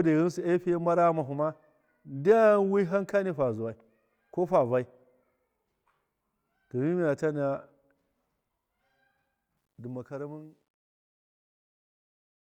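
From 9.57 s the speech fade-out turns gritty, worst from 11.0 to 12.4 s: truncation distortion on a fade, undithered, consistent with roughly 11-bit level steps.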